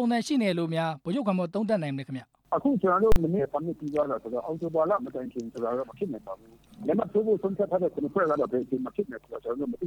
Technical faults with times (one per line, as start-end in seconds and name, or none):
3.12-3.16 invalid numbers at full scale